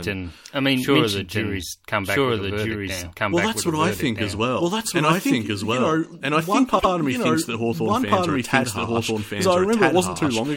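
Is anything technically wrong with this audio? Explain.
Yes, there are two faults.

A doubled audio track runs through the whole clip. A second copy of the speech follows about a second and a half behind, at roughly the same level. It is full-band, with no decay or room colour. The likely cause is a second, slower capture path or an edit holding two copies out of step.

Repeated frames occur from 6.78 to 6.89 s. A block of 104.5 ms is played twice, so the speech stutters briefly. The length fits a run of four compressed frames being written or sent again. The clip grows by 104.5 ms.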